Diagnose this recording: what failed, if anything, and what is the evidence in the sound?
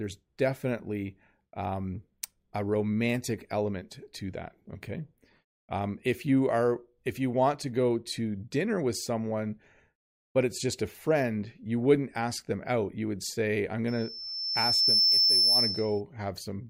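Loudspeaker feedback squeal, arising in the analogue acoustic path between the microphone and a loudspeaker it feeds. Just after "would say I'm", at 13.88 s, a pure tone near 5.3 kHz appears and builds over roughly a second to sit about 10 dB above the speech, lasting until 16.01 s. The microphone was hearing its own amplified output, and at that frequency the loop gain exceeded one, so the tone reinforced itself on every pass.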